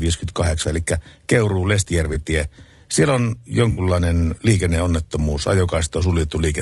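Across the whole speech clip the voice sounds rough and grainy, with noise filling the gaps between harmonics and a thin, synthetic top band. That steady texture points to low-delay AAC compression, likely AAC-ELD at a rate consistent with about 32 kbps, where short frames blur pitch detail.

At 2.13 to 2.17 s and again at 3.71 to 3.81 s, the sound briefly smears into a noisy, phasey patch. This is AAC frame loss with concealment. The decoder rebuilt the missing frames from the preceding spectrum, consistent with one lost frame and then three. Unlike the constant codec grain, these are isolated blurs, and the gaps are filled with smeared sound rather than going silent.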